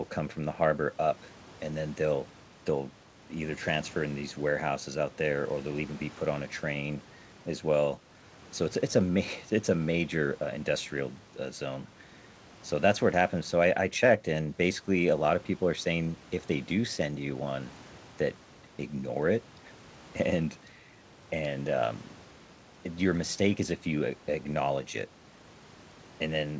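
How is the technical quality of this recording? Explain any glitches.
Nothing in this speech recording stood out as a technical problem on listening, and its limited high end simply reflects the wideband call path it came through.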